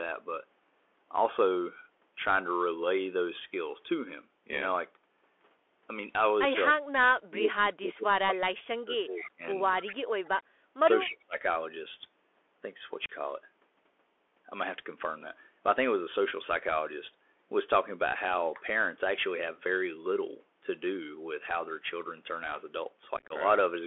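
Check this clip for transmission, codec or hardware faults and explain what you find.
Several faults are audible: a CVSD Bluetooth headset codec throughout, repeated dips from speech suppressed in double talk, two brief echo leaks, and two bursts of unconcealed Bluetooth headset packet loss.

Bluetooth CVSD headset codec, throughout. The speech travels at 64 kbps as a one-bit delta stream whose step size adapts to the signal. The band is confined to about 300 Hz to 3.4 kHz, so the speech sounds boxy and narrow. The codec damage is plainly audible. Loud, bright sounds overrun the step and roughen, sibilants turn scratchy, and a fine granular hiss sits beneath the speech.

Speech suppressed in double talk, at 6.7 to 6.85 s, 7.27 to 9.42 s, 9.88 to 10.55 s, 10.81 to 10.87 s and 11.06 to 11.36 s. The speech sinks sharply in these stretches, by up to about 35 dB, and only by about 15 dB in the short dip near 10.8 s. 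The longest stretch lasts around two seconds. The likely cause is an echo canceller that could not tell its own talker from loudspeaker echo while both sides spoke, so it turned everything down.

Echo leak, at 9.23 to 9.29 s and 9.82 to 9.93 s. A delayed copy of the speech arrives 254 ms behind the original. It is a faint scrap the first time, roughly 30 dB down, and more noticeable the second time, at about 15 dB below the speech. Both are short fragments. They likely come from residue that a loudspeaker-side echo canceller failed to remove and sent back down the line.

Unconcealed Bluetooth headset packet loss, at 13.06 to 13.09 s and 23.17 to 23.33 s. The first is a single 34 ms hole with abrupt edges, which fits around ten lost packets of a few milliseconds each. The second scatters 90 ms of missing audio over 135 ms, with the longest gap at 26 ms. That fits about twenty lost packets, and it sounds like a rough, crackly chop. 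Nothing filled these gaps, so the audio simply drops out and snaps back.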